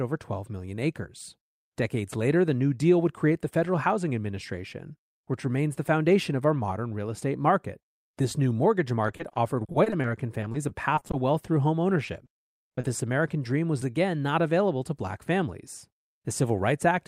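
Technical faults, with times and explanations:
9.07–11.15 s and 12.05–13.00 s, repeated packet loss (robotic sound): after "new mortgage" and again after "wealth through home", the speech turns choppy, with short holes (up to 30 ms) patched by stretching the preceding sound, so about 14% of each stretch is filled-in rather than real.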